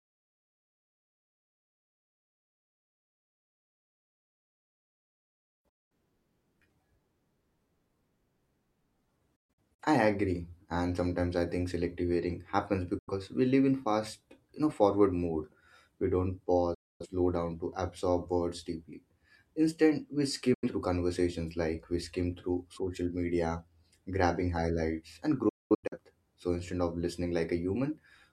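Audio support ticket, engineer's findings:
Speech drops abruptly to silence, each edge softened by an 8 ms fade, and resumes. Lost audio totals 85 to 341 ms per event, at six points:

5.69 s
9.36 s: short holes over 0.43 s, longest 128 ms
12.98 s: after "think selective hearing happens"
16.74 s: before "down to absorb words"
20.54 s: before "conversations like we skim"
25.49 s: holes over 0.43 s, longest 213 ms

Digital broadcast dropout: the receiver mutes on lost or checksum-failed frames. Gap lengths fit whole frames of about 43 ms. Gapped audio is unrecoverable.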